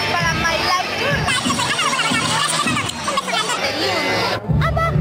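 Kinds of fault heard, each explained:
Section at the wrong speed: From 1.28 to 3.58 s the sound runs about 1.61 times too fast, so it is both hurried and raised in pitch by roughly seven semitones, then drops back to normal at once. Tempo and pitch moving together set it apart from a pitch-shift fault, which changes pitch but not timing. The likely cause is that stretch being played against a mismatched clock rate.
One channel drops out: From 4.39 to 4.44 s, a brief gap of under a tenth of a second, the level falls abruptly by about 6 dB and then snaps back, while the tone and pitch stay the same. A 6 dB fall with no change in character points to a likely momentary loss of one stereo channel before the mono sum. A dropout of the whole signal would instead leave silence, and a gain fault would not have such a clean halving.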